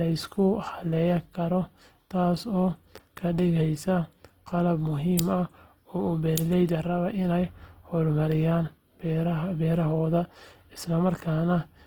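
A speech clip with plainly audible Opus compression throughout: the voice sounds grainy and rough, which likely comes from Opus's music mode at roughly 16 kb/s. A spectrogram shows bands filled with noise rather than holes, extending up to about 20.2 kHz. Pre-echo appears at 5.17 s, where a 16 ms hiss precedes a sharp attack, visible as a low smear of noise just before the onset in the waveform.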